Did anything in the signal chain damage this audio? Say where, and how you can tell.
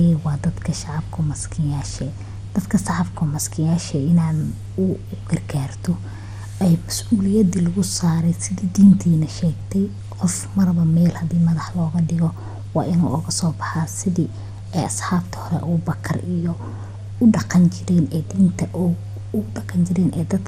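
Yes, the damage sits at the codec stage and runs through the whole speech clip: it likely passed through MP2 compression. Nothing is left above 16.4 kHz, and what remains has a gurgling, granular roughness as upper sub-bands drop in and out and the surviving ones are coarsely quantised, which fits a rate around 80 kbps. A plain low-pass filter would dull the top without that flickering grit.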